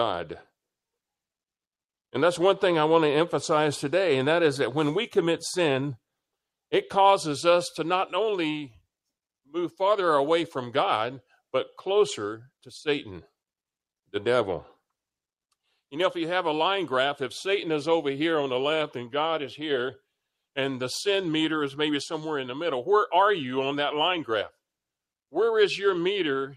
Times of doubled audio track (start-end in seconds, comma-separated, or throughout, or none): none